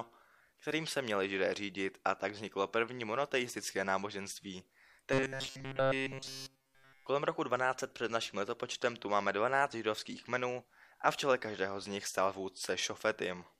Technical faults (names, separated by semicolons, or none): robotic sound from repeated short buffers